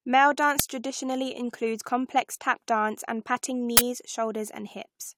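A short, loud crack cuts through the speech at 0.59 s, and a longer burst of digital noise follows from 3.77 to 3.79 s. Both are uninitialised buffer faults. Playback picked up a block of memory before any audio had been written into it, so leftover data was sent out as samples. The burst lengths suggest blocks of roughly 5 ms and 20 ms.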